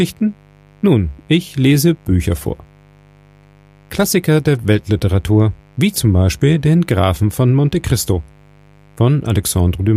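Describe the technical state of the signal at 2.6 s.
At 2.6 s the signal carries mains buzz, which runs steadily through the whole clip rather than appearing at that moment alone. Sharp switching spikes from a 50 Hz supply leak in twice per cycle, spreading harmonics well up into the kilohertz range, sitting roughly 30 dB under the programme. Unlike a smooth low hum, which stays near 50 Hz, this one has a raspy, edgy texture.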